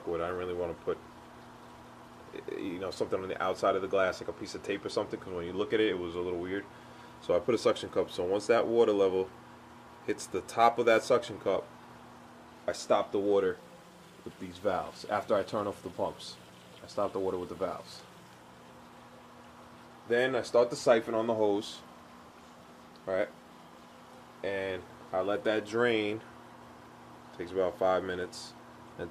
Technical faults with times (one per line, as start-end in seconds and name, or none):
4.10-6.69 crude rate conversion